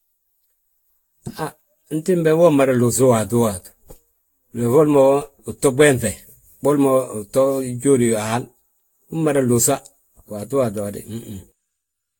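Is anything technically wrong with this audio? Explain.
Yes. Generation loss runs through the whole speech clip. The speech sounds swirly, smeared and hollow, with transients blurred and noise and gaps in the spectrum beyond what one encode at this bitrate would leave. Nothing is present above 19.1 kHz. The likely cause is repeated lossy re-encoding, around seven passes, consistent with a Vorbis-style coder near 70 kbit/s. Each pass requantises on a shifted frame grid, so the errors and spectral holes accumulate.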